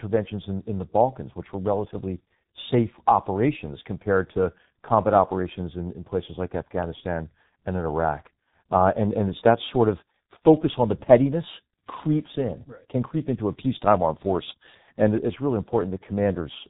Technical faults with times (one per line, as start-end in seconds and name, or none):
0.00-16.69 G.723.1 codec